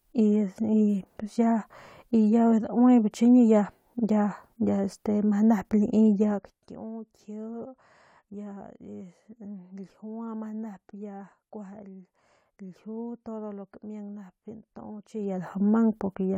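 From 6.27 to 6.66 s the speech level falls by roughly 15 dB with zipper noise: the gain moves in 1 dB jumps, around fifty a second, with no smoothing between them, so each jump leaves a tiny click and the fade carries a fast ticking buzz. The same zipping returns from 15.08 to 15.51 s as the level climbs back by about 15 dB. A properly smoothed fader move would glide silently.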